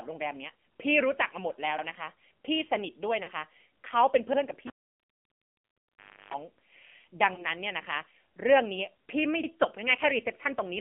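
AMR narrowband mobile codec, throughout: the sound is squeezed into a telephone band of roughly 200 Hz to 3.4 kHz, and the pulse-driven vocal tract model gives the speech a plainly buzzy, synthetic edge, which fits a low 7.4 kbps mode.

Overlapping chunks, at 1.78 s: the audio is processed in blocks that begin before the previous block has finished, so about 50 ms at the join plays twice. The result is a short stutter.

Lost AMR speech frames, from 3.23 to 3.29 s: the frames fail their checksum, so the decoder repeats the last good pitch and vocal tract settings at falling gain. About 40 ms is lost, which fits two 20 ms frames. It is heard as a brief smeared, fading warble before the sound recovers slightly rough.

Overlapping chunks again, at 4.33 s: another 50 ms doubled segment gives the same stutter.

Cable pulled and plugged in, from 4.67 to 6.34 s: a live lead is pulled out with a pop, giving roughly 1.6 s of near silence. 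Then, for about a third of a second, a 50 Hz mains buzz comes in while only the plug tip makes contact. A second pop follows as the sound returns.

Lost AMR speech frames, from 7.35 to 7.46 s: about 20 ms is missing, which fits a single frame. The concealment produces a short dip.

Overlapping chunks, at 9.43 s: a final 50 ms repeat gives another stutter. The regular spacing of the repeats fits 2.5 s processing chunks.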